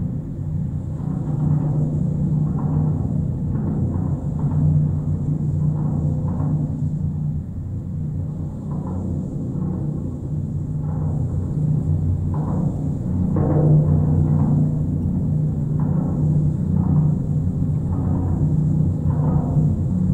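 No technical faults can be heard anywhere in the recording; the signal holds steady and intact from its opening moment to its last.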